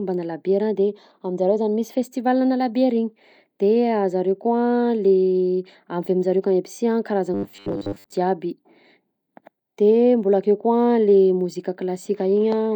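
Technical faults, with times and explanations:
7.34 to 8.16 s, robotic sound from repeated short buffers: the voice turns into a rigid, metallic buzz at 100 Hz that only loosely follows the speech. Likely the audio arrived too slowly, so a 10 ms chunk kept replaying over most of the real signal, fixing that pitch.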